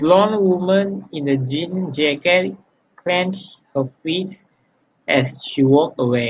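Nothing technical stands out in this speech recording, so there's really no fault here to point at.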